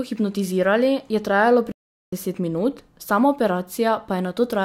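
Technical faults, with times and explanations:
1.72 to 2.13 s, playback stall: right after "hipnotizirali je trajalo" the speech stops dead for about 0.41 s of silence, then resumes. This is likely the player running out of buffered data or its output thread being blocked, leaving nothing to play until it recovered.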